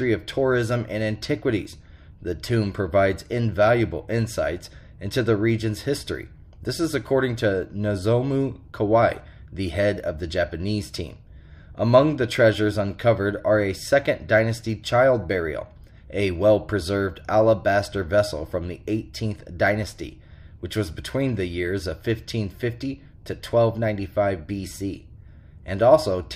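Nothing stood out as a technical fault when listening to this recording.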